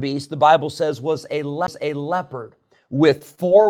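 At 1.67 s the speech has a CD skip: the laser jumped tracks, so a brief tick and mute of roughly 15 ms precede an abrupt jump in the sound. From 3.10 s to the end, repeated packet loss leaves choppy, robotic speech. Lost packets are patched by stretching the last sound.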